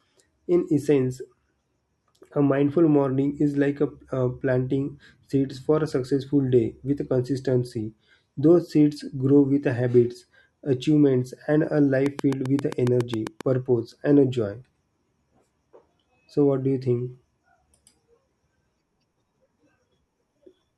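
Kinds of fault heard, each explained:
Train of clicks: likely interference injects regular pulses, giving about ten ticks at 7.4 per second, about 10 dB above the speech, just before "purpose and joy".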